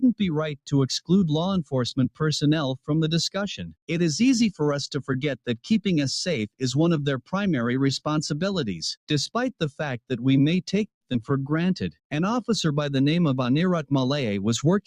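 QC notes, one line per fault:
3.62–3.90 s, sound cut by the noise suppressor: the suppressor misread part of the sound as noise and pulled it down by about 12 dB, affecting roughly 150 ms. On a spectrogram the band energy thins abruptly there; the waveform envelope dips, then recovers.
10.87–11.04 s, call audio freeze: the last sound is stretched briefly, then about 120 ms of silence, a 137 ms hold likely from late packets draining the jitter buffer. Nothing is lost, only delayed. The waveform shows a decaying tail, then a flat line.
11.13 s, skip ahead: playback jumps forward, dropping roughly 70 ms of audio and cutting the delay by about 50 ms, with only about 9 ms bridging the join. On the waveform two unrelated segments butt together; the spectrogram shows a vertical discontinuity.
11.21–11.51 s, jitter buffer slow-down: the receiver repeated short pitch periods to rebuild its reserve, adding 53 ms and running the sound at 85% speed with pitch unchanged. 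The spectrogram shows harmonics stretched horizontally; the waveform shows near-identical cycles repeating.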